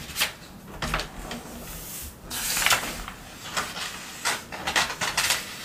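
No technical faults can be heard anywhere in the audio. Nothing in it calls for a time or a cause to be noted.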